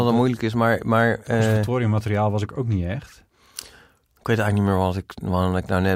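No technical faults can be heard anywhere in the recording. The speech comes through without anything in the signal drawing attention to itself.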